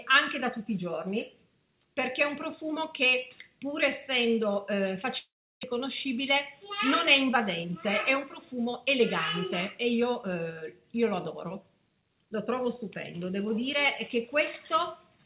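From 5.18 to 5.79 s the sound breaks up. The last sound stretches into a fading buzz, then about 340 ms of near silence follows. Audio resumes with roughly 400 ms gone and slightly shifted timing. A long network dropout is the likely cause. Throughout, the band stops at 4 kHz, as expected from the G.711 mu-law call path.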